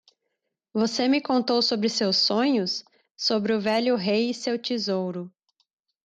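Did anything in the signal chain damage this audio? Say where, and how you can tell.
No, nothing audible in this speech points to damage at any stage of the signal chain.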